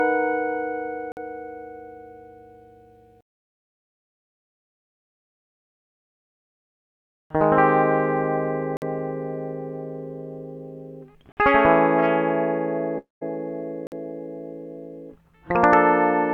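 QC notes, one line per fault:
1.12 s, 8.77 s, 11.32 s and 13.87 s, gap between chunks: the music stops dead for 50 ms at each of these points and resumes exactly where it left off, so nothing is skipped but the flow is broken. These are the joins between roughly 2.5 s chunks that were played back with silence between them. On a waveform each gap is a flat near-silent slot with abrupt edges, and on a spectrogram it is a thin vertical blank band across all frequencies.
12.98–13.23 s, long network dropout: the music gives way to a smeared continuation of the last sound that fades out, leaving near-silence for about 160 ms before playback returns. About 240 ms of music is lost, and the returning audio picks up later in the piece. The likely cause is a network stall during which the receiver concealed roughly 230 ms by extending what it last heard. A spectrogram shows blurred, decaying energy followed by an empty stretch, then an abrupt restart. 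The waveform shows a tapering envelope, a flat section, and a hard re-entry.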